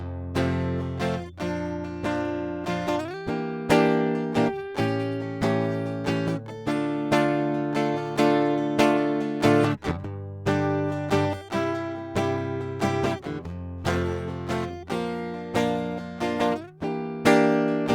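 Nothing goes wrong in this bit of music, and there's no technical fault anywhere in it to point out.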